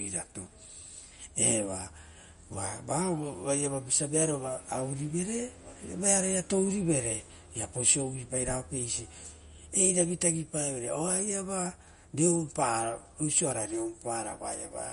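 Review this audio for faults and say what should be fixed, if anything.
The encoder was likely MP3 at a starved bitrate, which fits about 40 kbps. Throughout the speech it cuts everything above 10.6 kHz and drops weak frequency lines frame by frame, so sibilants turn swirly and metallic and attacks smear. Encode at a higher bitrate or use a lossless format.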